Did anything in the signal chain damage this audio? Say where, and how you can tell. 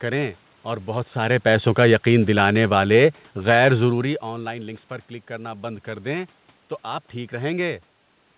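Yes. The call processing's automatic gain falling stage judged the input too loud or its background noise too strong and pulled its gain down by about 5 dB between 1.18 and 4.27 s. The room noise sinks along with the speech, which a talker simply moving away wouldn't cause.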